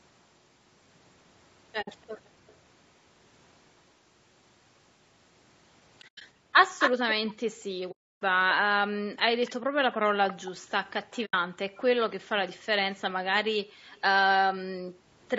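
Across the whole clip the speech sounds rough and grainy, with a hiss-like fill between the harmonics and a thin, somewhat synthetic top end that stops at 8 kHz, where the call's microphone processing band-limits it. The likely cause is low-delay AAC compression, AAC-ELD at a low bitrate near 32 kbps. At that bitrate too few bits reach the spectrum, so coarse quantization leaves noise in the gaps between the harmonics.

At 1.81 to 1.88 s the sound fades into a soft-edged 60 ms hole and back out. This is AAC frame loss with muting. The decoder zeroed the missing spectrum, and the overlapping windows tapered the edges. The gap fits three 20 ms frames. Just after, at 2.14 to 2.19 s, the room background dips by about 18 dB for roughly 50 ms. This is background gated by the echo canceller, which pulled the microphone down while the loudspeaker played.

From 6.01 to 6.22 s several muted holes are scattered over about 200 ms, the longest near 100 ms. 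The background then drops by about 38 dB from 6.34 to 6.54 s.

From 6.79 to 7.34 s a copy of the speech returns 257 ms late at roughly the same level as the original. This is echo leak: the far side's echo canceller likely failed to remove its loudspeaker's sound from its microphone, so that sound was sent back.

A long 300 ms muted gap runs from 7.91 to 8.22 s. From 9.45 to 12.61 s a fainter echo trails the speech at 293 ms, about 20 dB down. Within that stretch, another 80 ms frame-loss hole falls at 11.25 to 11.34 s.

Near the end, the background is gated by about 39 dB at 13.68 to 13.87 s. A very faint 293 ms echo scrap follows at 13.95 to 14.02 s. A final gate of about 38 dB, lasting roughly 400 ms, runs from 14.86 to 15.22 s.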